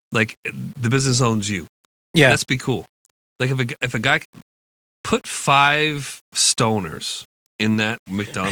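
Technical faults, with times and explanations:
Throughout, low bit depth without dither: the speech carries a grainy, rough distortion that rises and falls with the sound itself, most obvious on quiet syllables and decaying word endings, where the texture turns gritty and the faintest detail sputters or drops to silence. The error sits roughly 35 dB below the signal, which fits 8-bit rounding. The likely cause is requantisation without dither, so the rounding error stays correlated with the waveform instead of becoming a steady hiss.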